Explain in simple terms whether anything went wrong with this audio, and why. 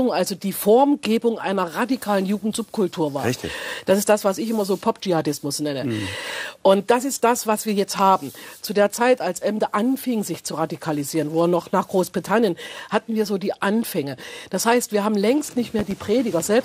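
Near the end, from 15.79 to 15.94 s, two sharp pops jump out above the audio, which keeps going underneath. This is a loud pop, likely from a sudden electrical jolt reaching the signal, such as a plug, switch, static or driver glitch.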